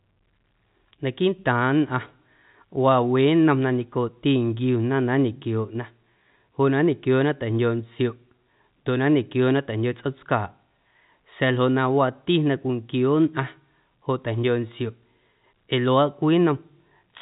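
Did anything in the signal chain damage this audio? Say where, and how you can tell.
No, nothing in the signal chain damaged this audio.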